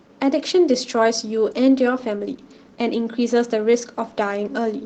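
The clip is speech with Opus voice compression throughout. The sound is plainly degraded, consistent with a low rate near 16 kbps. The linear-prediction core codes the excitation coarsely, so the voice turns slightly hoarse and robotic. The band above 8 kHz is coded by a separate CELT layer in hybrid mode.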